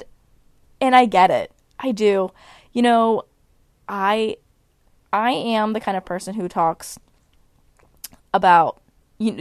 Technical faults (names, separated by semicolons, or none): none